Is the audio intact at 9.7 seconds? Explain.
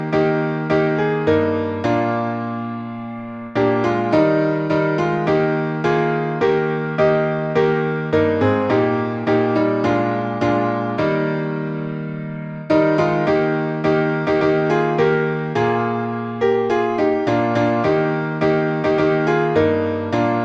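Yes, at 9.7 seconds the audio plays through cleanly, with no dropout, click, distortion or other fault to be heard.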